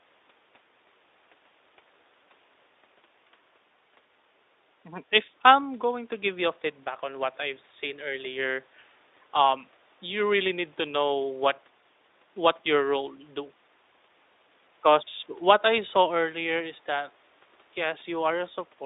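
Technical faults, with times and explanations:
No technical faults can be heard in this clip. The speech comes through the call microphone processing and the Speex codec as a telephone-like band of roughly 300 Hz to 3.7 kHz, with nothing above 8 kHz and only light codec colouring.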